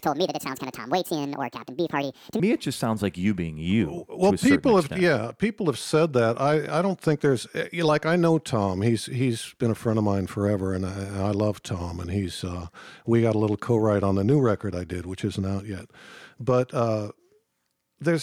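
From the start to 2.4 s, the opening stretch was likely played back against the wrong clock, running 1.65 times faster than it was recorded. That is a section at the wrong speed: because speed and pitch are tied together, the speech there comes out both hurried and raised by roughly ten semitones, giving it a chipmunk-like, squeezed quality. At 2.4 s the rate snaps back, and the drop in pitch and tempo is abrupt.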